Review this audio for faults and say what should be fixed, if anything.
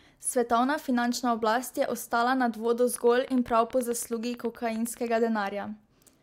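A train of clicks runs from 2.96 to 5.19 s: about twenty near-identical pulses at a steady 9.5 per second, peaking around 5 dB above the speech and audible in pauses too. The regular spacing points to likely electrical interference or a faulty connection or power supply. Prevent it by separating audio cabling from nearby equipment, checking grounding, and confirming the interface's buffer and connection are stable.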